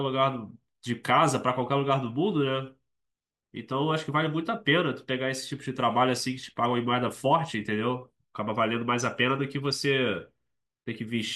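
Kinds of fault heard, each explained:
Nothing to flag here: the speech comes across without any technical fault to point to.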